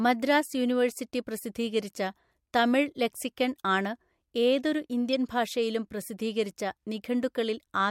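A speech clip with one corrupt frame decoded from 5.13 to 5.15 s, right after "ആണ് ഏതൊരു" and before "ഭാഷയിലും പ്രസിദ്ധീകരിച്ച". Flipped bits in about two compressed frames got played anyway, putting energy at the wrong frequencies, so you hear a short chirpy blip peaking around -20 dBFS.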